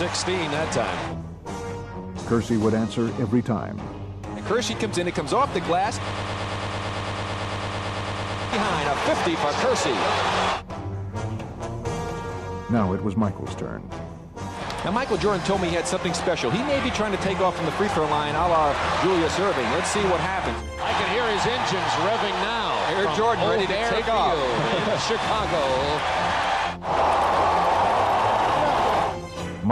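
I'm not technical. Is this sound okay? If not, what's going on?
No. A broken-record loop runs from 6.11 to 8.53 s: a slice of sound 0.11 s long repeats 22 times back to back. The player or stream likely stalled and kept replaying its last fragment, so the sound for those seconds is lost.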